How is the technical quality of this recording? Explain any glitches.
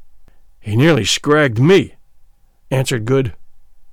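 The recording has one clear technical problem: a stretch of hard clipping from about 0.79 s to 1.78 s. For roughly a second, the speech is driven about 7 dB beyond what the signal chain can carry, so every peak is sliced off flat at the ceiling. Those squared-off tops create harmonics high above the voice, heard as distortion on the louder parts of the speech. On a waveform, the peaks in that span sit pressed against a flat line. A spectrogram shows bright, smeared energy reaching far into the upper kHz range.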